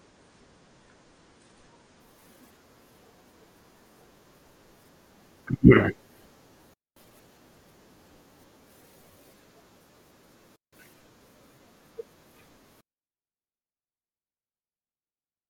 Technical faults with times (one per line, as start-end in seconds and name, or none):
0.00-2.00 adaptive stream starting at a low bitrate
6.74-6.96 digital wireless dropout
10.56-10.73 digital wireless dropout